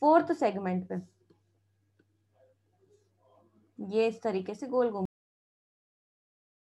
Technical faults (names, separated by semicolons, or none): cut-off end